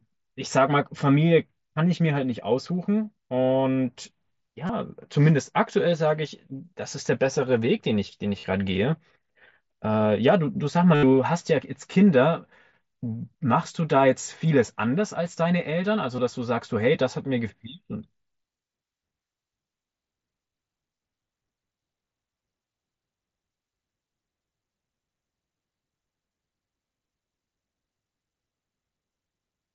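At 4.67–4.69 s, 8.40–8.44 s, 10.95–11.03 s and 16.16–16.18 s the speech shows concealed Bluetooth headset packet loss. Voice packets were lost, and the phone refilled each gap by repeating the closest-matching recent stretch of waveform. The short losses, about 23 ms, are the briefest. The 38 ms gap and the 83 ms gap at 10.95 s give a held buzzy tone at full level, then a slight warble as real speech resumes. On a waveform these gaps show as periodic, copy-pasted cycles. A spectrogram shows flat harmonic stripes instead of moving formants, all within the mSBC codec's 8 kHz band.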